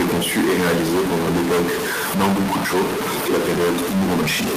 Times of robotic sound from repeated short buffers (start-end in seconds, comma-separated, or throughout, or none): none